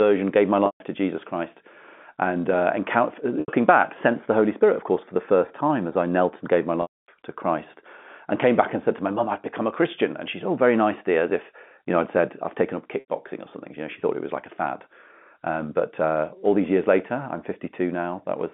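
Packet loss with pitch repetition at 0.66–0.80 s, 3.40–3.48 s, 6.82–7.08 s and 13.00–13.07 s: gaps of 140, 80, 260 and 80 ms, each bridged by repeating the last pitch period and fading it over about 50 ms. The shorter gaps sound like a slightly held, buzzy note; the longer ones fade into silence, and the speech returns with a short cross-fade.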